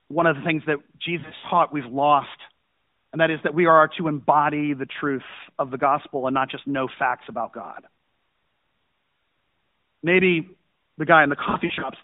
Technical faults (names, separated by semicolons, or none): lost AMR speech frames